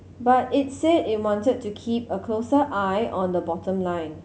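No technical faults can be heard anywhere in the speech.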